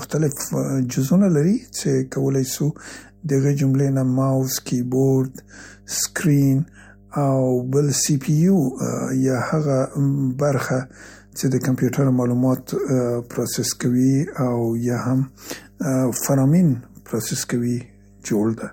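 From start to finish, mains hum sits under the speech as a steady low tone at 50 Hz, about 30 dB below the speech level. Power-line current is leaking into the signal, most plausibly through a ground loop or a nearby transformer. On a spectrogram it appears as an unbroken horizontal line at 50 Hz across the whole clip. On the waveform it shows as a faint, regular ripple that is easiest to see in the gaps between phrases.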